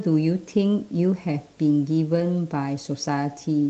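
From 2.11 to 2.21 s, a lost packet rebuilt from error correction: about 60 ms, which fits three lost 20 ms packets, was replayed from low-bitrate copies in the following packets. The speech continues without a gap, but briefly turns rougher and noisier. That unbroken continuation sets it apart from plain loss concealment, which leaves a dropout or a smeared, stretched tone. The rest of the call path runs through Opus at 32 kbps, with a band ending near 8 kHz.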